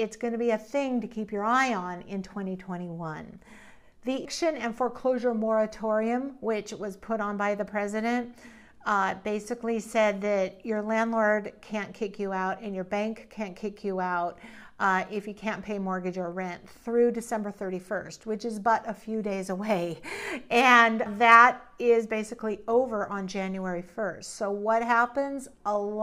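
Damaged data in a compressed stream shows up twice, at 4.25 s and 21.06 s. At each point part of the encoded data was corrupted, so the decoder misread or rejected the frames there, lost sync and had to hunt for the next valid frame header before playback could continue. Each time, the audio breaks into a brief chirp, squawk or blip where the bad frames pass through the decoder.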